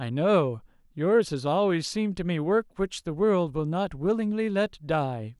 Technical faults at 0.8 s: none

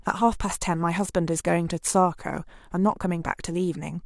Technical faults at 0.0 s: none

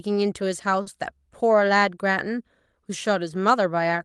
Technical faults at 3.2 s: none

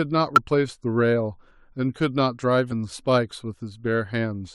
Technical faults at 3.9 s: none

